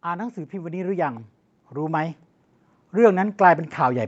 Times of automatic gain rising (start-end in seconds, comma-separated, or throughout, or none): 0.05-2.23, 2.92-4.07